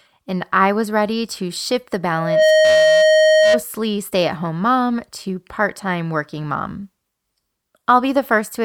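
From 2.16 s to 3.63 s a steady tone near 626 Hz swells up over the speech in roughly a third of a second and then rings loud and unwavering, sitting about 10 dB above the talker until it cuts off. This is loudspeaker feedback squeal. The microphone is hearing the loudspeaker it drives, and around 626 Hz the round trip through the system gains more than it loses, so that one pitch keeps feeding itself and climbs into a howl.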